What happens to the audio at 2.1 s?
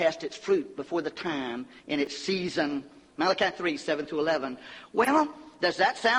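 Around 2.05 to 2.07 s there's a chunks-out-of-order glitch: one 10 ms block lands one slot late, swapping places, so you get a brief jumbled moment with three hard joins.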